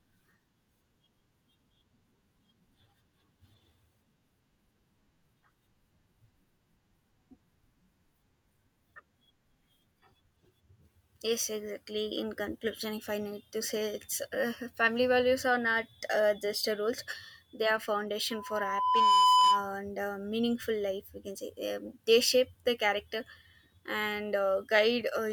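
From 18.30 to 19.74 s a steady 1 kHz tone swells in under a second to about 10 dB above the speech, then stops. This is loudspeaker feedback squeal: the microphone picked up its own loudspeaker, and the loop gain at 1 kHz exceeded one.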